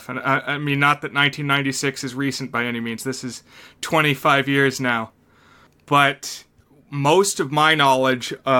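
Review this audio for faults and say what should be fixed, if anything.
Nothing here needs fixing, since no technical faults turn up anywhere in the recording.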